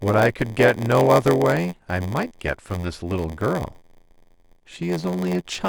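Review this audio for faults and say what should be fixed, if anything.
Block size mismatch (padded) throughout the speech: short written blocks are zero-filled to fit 512-sample reads, causing an 86.1 Hz buzz and playback at 0.938x speed. Match the writer's block size to the reader's so no padding is inserted.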